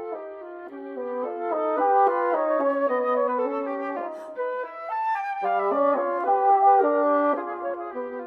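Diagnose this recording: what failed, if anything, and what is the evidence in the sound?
A single sharp click at 6.21 s points to dropped samples, most likely at the driver or buffer stage. A couple of samples vanish, so the waveform jumps abruptly between values. A spectrogram shows one thin vertical line spanning all frequencies, and no audible gap.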